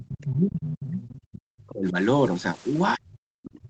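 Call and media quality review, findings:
Speech suppressed in double talk, 0.00–1.96 s. Talker's level dips, deepest by roughly 40 dB. Likely echo canceller mistaking near and far talkers during overlap and attenuating both. Recurs 2.96 s to end, again down roughly 40 dB. Same likely component, same gain-down behaviour while the far side speaks.

Other side's voice leaking through, 1.08–1.16 s. Brief scrap of a second voice, about 25 dB under the talker. Likely residual loudspeaker echo the echo canceller failed to subtract from the microphone signal. It falls inside the first suppression stretch.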